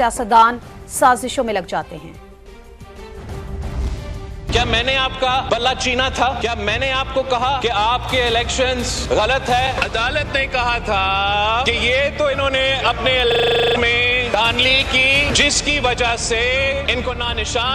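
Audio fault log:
13.20 s, block of digital silence: for about 0.48 ms the signal drops straight to zero and returns with no fade, so the abrupt steps at both edges produce a single sharp tick rather than an audible hole. The gap is far too brief to register as missing sound. Unlike the loop that follows, nothing repeats. The audio simply vanishes for an instant, as when an output buffer is not filled in time and goes out empty.
13.32 to 13.76 s, system hang loop: one 40 ms slice of audio plays 11 times in exact succession, giving a rattling stutter at 25 Hz, on the border between a coarse buzz and a machine-gun effect. The system stalled while the sound hardware kept cycling its ring buffer, so about 0.4 s of new material never arrived. The loop's identical repeats and steady rate set it apart from random dropouts or packet-loss glitches.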